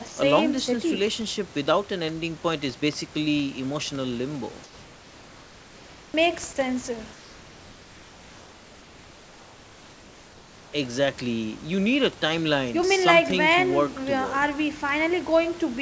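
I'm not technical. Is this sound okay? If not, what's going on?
No. At the very start, from 0.08 to 0.17 s, a sliver of speech vanishes into a steady hiss. This is sound dropped by the voice detector, which likely mistook it for background.

From 4.64 to 6.14 s and again from 7.13 to 10.73 s, the room's natural background turns into a flat, featureless, slightly quieter hiss. That is comfort noise in place of the background, likely because sending paused during silence.

At 6.12 s the returning speech starts abruptly, missing its soft beginning. This onset clipped by the voice detector likely comes from it reacting a moment late.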